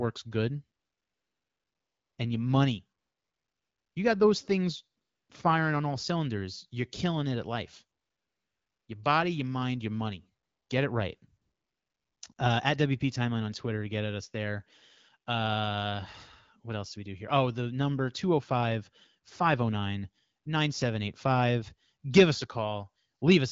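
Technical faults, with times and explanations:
0.79 to 23.21 s, AMR comfort noise: nine pauses, lasting from 1.38 s at 0.79 s down to 20 ms blips near the end. The phone judged these moments silent and stopped sending speech frames. The receiver filled each gap with smooth, steady synthetic noise that switches in and out.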